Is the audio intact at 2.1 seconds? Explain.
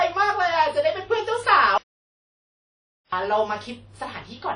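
No. At 2.1 seconds the audio is in an audio dropout to silence that runs from 1.78 s to 3.12 s, about 1.35 s in total. The signal cuts off mid-flow and the gap is silent, with no room tone or noise floor. That points to the input feed being lost while the recorder kept writing silence, likely a disconnected device, a broken link or an accidental mute. Whatever was spoken during that span is gone.

The surrounding audio also carries WMA-style compression damage, plainly audible on either side of the gap. Nothing is present above about 10.1 kHz, and the speech has a ringing, washy quality with a hiss that swells and fades with the signal. This is the sound of a transform codec at a low rate, consistent with roughly 32 kbps WMA. Quantisation noise spreads across long blocks and weak spectral detail is discarded, most likely from encoding at that bitrate.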